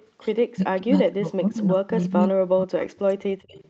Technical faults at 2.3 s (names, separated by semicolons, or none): speech suppressed in double talk